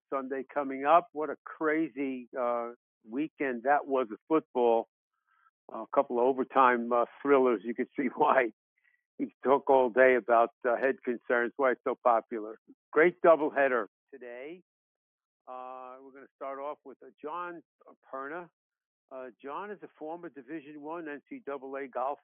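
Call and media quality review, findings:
Sudden gain jump at 13.87 s, level drops by about 12 dB in a single step and stays down through the end of the clip. Signal and noise floor fall together. Likely cause: a gain setting or bit shift applied without a ramp. Distinguished from a fade or AGC action by the absence of any gradual slope, and from a dropout or mute because the sound continues, only quieter.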